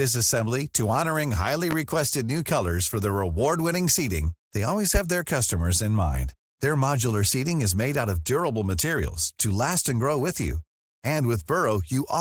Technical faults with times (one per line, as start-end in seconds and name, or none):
0.00-12.20 Opus voice compression
1.71-1.74 loud pop